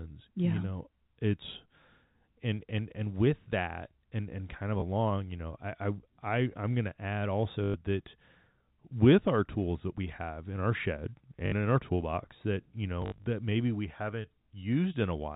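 Packet loss with last packet repeated occurs at 4.80–4.82 s after "and and kind of", at 7.64–7.74 s, at 11.46–11.52 s after "have in our shed", and scattered across 13.02–13.26 s before "that maybe we haven't". Each gap is filled by replaying the previous chunk, out of step with the pitch cycle. Longer runs buzz at about 50 Hz, which fits 20 ms packets, giving a brief robotic stutter in the telephone-band audio.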